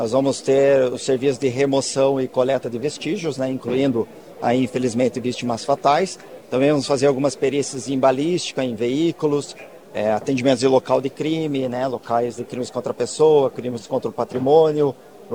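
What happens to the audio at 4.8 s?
At 4.8 s the sound carries a grainy, signal-following distortion, present from start to finish, sitting around 40 dB below the signal. This is likely low bit depth without dither, consistent with truncation to about 9 bits, leaving rounding error that tracks the waveform.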